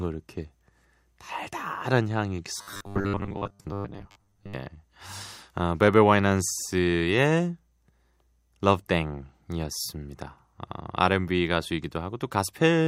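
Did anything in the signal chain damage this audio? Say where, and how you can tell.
Yes. The audio driver or buffer stage was likely starved of new samples from 2.58 to 4.54 s, so playback filled the gaps by looping a very short stretch of already-received audio while the real signal in between was thrown away. This is robotic sound from repeated short buffers. The loop imposes a fixed 100 Hz buzz, which fits a buffer of about 10 ms. With most of the audio in that span replaced by repeats, the speech becomes a hard metallic drone that only loosely tracks the original.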